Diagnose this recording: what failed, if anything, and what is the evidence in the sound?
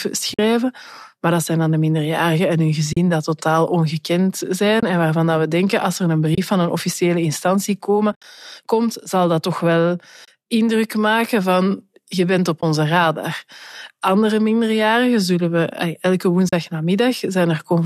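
The network stage lost frames at 0.34, 2.93, 4.80, 6.35, 8.12 to 8.24, 10.25, 12.61 and 16.49 s, leaving soft holes with 20 to 90 ms lost per event. This is AAC frame loss with muting on a likely low-delay AAC stream. The decoder zeroed the missing spectra, so the spectrogram shows full-band blank columns and the waveform shows smooth fade-outs and fade-ins.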